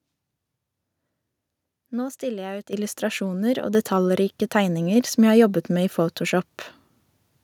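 At 2.73 s, right after "stiller jeg ut", the microphone volume steps up by about 9 dB, then again at 3.75 s after "jeg ut illustrasjoner og", by about 6 dB. Speech and background jump together as the input gain gets bumped mid-sentence.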